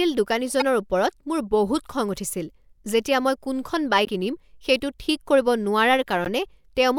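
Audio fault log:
0.60–0.62 s, 4.04–4.08 s (right after "উঠিছিল যেতিয়া মই কোনখন") and 6.25–6.28 s: damaged data in a compressed stream. Corrupted bytes make the decoder misread frames and resync at the next header, producing brief glitches. A spectrogram shows brief broadband smears, and the waveform shows abrupt discontinuities.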